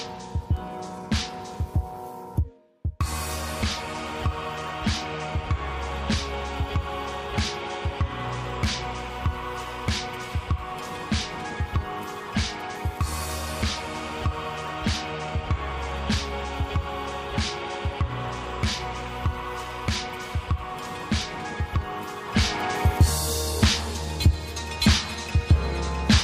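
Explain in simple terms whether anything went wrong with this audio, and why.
Nothing went wrong with this audio: it keeps a steady, continuous signal all the way through, with nothing that breaks or disturbs it at any point.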